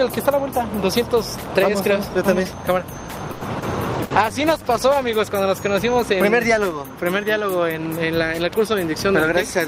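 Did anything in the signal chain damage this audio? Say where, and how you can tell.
Yes. Everything happens at the network and codec stages of a call, between about 3.3 and 5.4 s.

At 3.31 to 3.44 s there is a call audio freeze. The last sound is drawn out as a fading buzz or hiss for about 100 ms. Afterwards the audio picks up exactly where it stopped, with nothing skipped, and the whole clip now runs about 100 ms later. That points to a network stage. The likely cause is packets held in transit while the jitter buffer ran dry.

At 3.59 to 3.65 s there is a short concealed packet loss. It is heard as a brief smear. The decoder bridged the hole by extending the preceding sound for about 30 ms, then blended back in. About 60 ms of real audio never arrived, so that stretch is simply gone. The playout delay also shrinks by a few tens of milliseconds here. This is network loss, patched over at the decoder.

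From 3.97 to 5.4 s there is a call bitrate drop. The sound turns rough and muffled, and the top end dulls. It stays degraded for about 1.3 s before clearing. The change fits an Opus encoder told to step down from about 40 kbps to 15 kbps after the bandwidth estimate fell. At that rate the coding grows coarse and the high frequencies are cut. This happens in the codec, driven by network conditions.

At 4.04 to 4.13 s, inside the low-bitrate stretch, there is a burst of packet loss. The receiver held the last sound as a decaying buzz or hiss for about 60 ms. The audio then resumes further on, with about 60 ms missing. The held tail followed by the jump gives away several consecutive packets lost or arriving too late to play.

At 4.33 to 4.64 s there is a jitter buffer slow-down. The audio runs at about 90% speed while the pitch stays the same, so sounds are drawn out. The receiver repeated short periods to add about 37 ms of reserve to a buffer that had run low or had just raised its target delay. 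This is buffer management on the receiving side.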